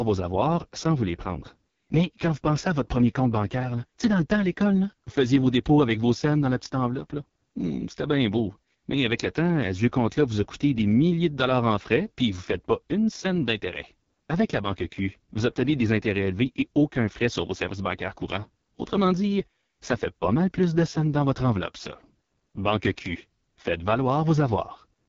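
Throughout the recording, the speech has passed through the AMR wideband (HD Voice) codec at its lowest mode, and the heavy damage points to a bitrate of about 6.6 kbit/s. The codec models the vocal tract and excites it with sparse pulses, so at this rate there are too few bits to capture the fine detail. The speech comes out rough and raspy, and nothing is left above about 7.2 kHz, with the top band filled by synthetic noise.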